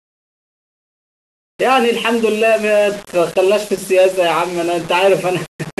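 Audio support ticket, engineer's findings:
Low bit depth without dither, throughout the speech. Grainy, signal-following distortion; quiet tails sputter or drop to silence. Quantisation noise roughly 20 dB below signal, which fits about 5-bit rounding. Likely cause: rounding converter or export stage. Waveform shows visible stair-steps. Spectrogram shows broadband hash that tracks syllables and vanishes in gaps.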